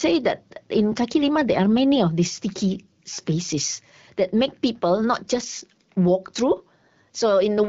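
No technical faults can be heard in this speech.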